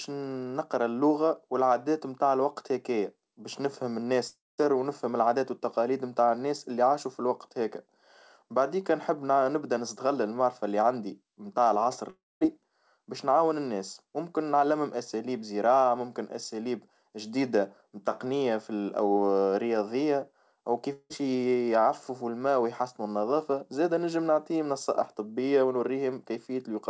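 A likely long network dropout, where packets stopped arriving and the receiver papered over the gap, hits three times. After "الوقت هكايا باش نفهم", 4.28–4.60 s loses about 0.3 s. After "اللي عندي متاع العصر", 12.10–12.43 s loses about 0.32 s. After "رياضية أو", 20.93–21.12 s loses 0.18 s. Each gap begins with a fading buzz continuing the last sound, then near-silence before the audio resumes with that stretch gone, all within the G.722 call path's band, which stops at 8 kHz.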